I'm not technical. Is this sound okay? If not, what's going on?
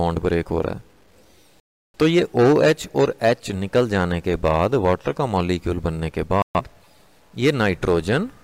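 No, there are two problems. All the way through, quiet parts sound grainy and gritty, likely from low bit depth without dither, where the audio was stored with too few steps. There are also two digital broadcast dropouts: the sound cuts out from 1.60 to 1.98 s and again from 6.42 to 6.61 s, because the receiver lost the signal and muted.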